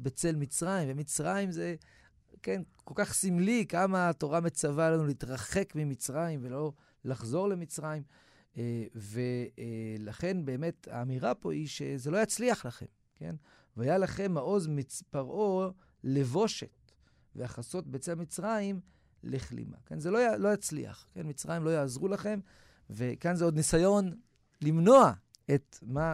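No technical faults can be heard anywhere in the recording.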